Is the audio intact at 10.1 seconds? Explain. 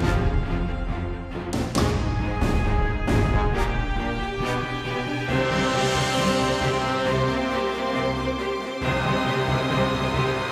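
Yes, at 10.1 seconds the audio plays through cleanly with no dropout, click, distortion or other fault.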